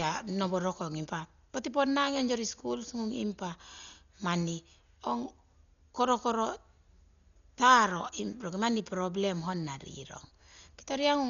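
From start to end, the speech is dull and muffled. Nothing is left above 6.9 kHz, so the sibilants lose their edge. Around the voiced tones there is a rough, fluttering noise. The damage is heavy. The likely cause is Dolby Digital compression at a very low rate, one that fits about 40 kbps. The encoder narrowed the band and gave many frequency lines no mantissa bits. The decoder filled those gaps with dither noise, which makes the grainy flutter.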